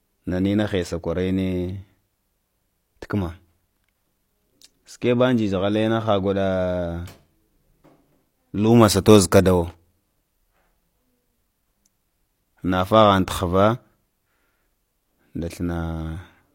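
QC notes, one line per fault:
9.70–9.75 s, loose connector crackle: a short, irregular burst of scratchy crackle lasting under a twentieth of a second, rough and uneven rather than a single clean click. It comes from a worn or dirty contact in the signal path that briefly loses and regains connection as it shifts. The speech signal is chopped on and off many times in quick succession, and any DC present on the line turns each make and break into a pop.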